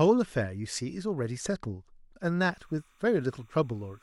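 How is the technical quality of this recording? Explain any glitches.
The recording has one glitch. From 2.45 s to the end there is timecode bleed: 30-frame linear timecode leaking from a neighbouring track or cable adds a faint chirping warble, well below the speech, flipping between roughly 1 and 2 kHz rather than holding one steady whistle pitch.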